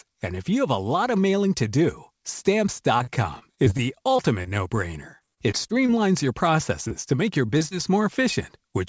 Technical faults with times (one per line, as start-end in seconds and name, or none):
2.98-5.90 repeated packet loss (robotic sound)
6.88-7.76 repeated packet loss (robotic sound)